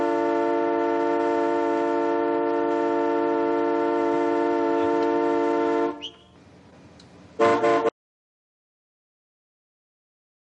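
At 7.89 s the sound cuts off abruptly and the clip stays silent through to the end, about 2.6 s later. This is an audio dropout to silence: the gap carries no room tone or noise floor at all. The likely cause is a lost input, such as a disconnected device, a broken link or an accidental mute, while recording continued. Whatever occurred after the cut was never captured.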